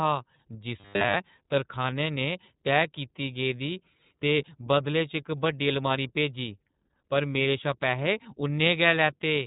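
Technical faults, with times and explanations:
Throughout, iLBC codec: audibly rough, slightly synthetic speech with nothing above 3.8 kHz, from narrowband coding of independent 30 ms frames at 13.33 kbps.
0.80 to 1.14 s, robotic sound from repeated short buffers: a rigid metallic buzz at 100 Hz, likely from a 10 ms stretch repeated in place of most of the real audio.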